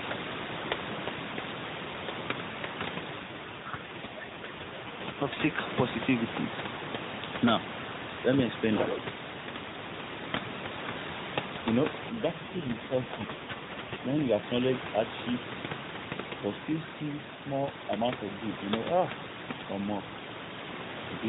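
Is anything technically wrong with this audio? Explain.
Yes, there are two AMR rate drops, at 3.20 to 5.57 s and 12.10 to 14.46 s. The speech stays in the same narrowband with no gap, but turns rougher and more synthetic. This fits the network cutting the mobile codec from 12.2 to 5.9 kbps to protect a weak link.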